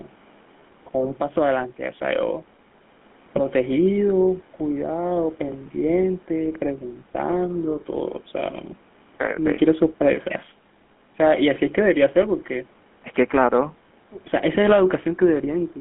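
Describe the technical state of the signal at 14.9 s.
At 14.9 s the speech carries the GSM full-rate codec, present across the whole clip. The vocal tract is modelled and excited by regularly spaced pulses, which fits a 13 kbps stream, giving a plainly audible buzzy, gravelly roughness within a 200 Hz to 3.4 kHz band. A plain telephone band-limit would sound muffled but clean.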